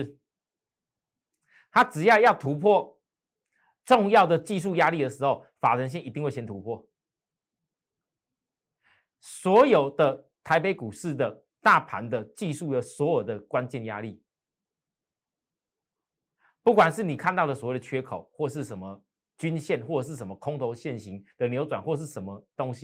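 Nothing in this speech recording stood out as a technical fault on listening.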